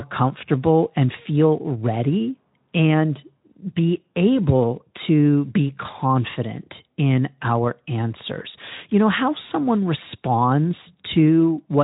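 A speech recording with no technical faults. It runs through the Speex codec at 15 kbps with only light coding damage, and its content stops at about 3.8 kHz, leaving nothing in the upper band.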